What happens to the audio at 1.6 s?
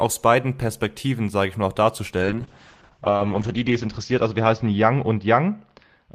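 Nothing goes wrong at 1.6 s; the speech carries on there without any dropout, click, distortion or other technical fault.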